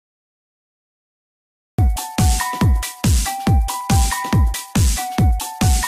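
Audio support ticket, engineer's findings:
Cut-off start. Digital silence 0 to 1.79 s, then sound begins abruptly mid-event at 1.79 s with no attack or fade. Probable component: capture or stream start, engaging late. Mechanism: recording opened after the sound was already under way. Distinct from a fade-in or gate (no gradual ramp, no pre-roll noise floor) and from a dropout (silence sits at the head only, not mid-clip).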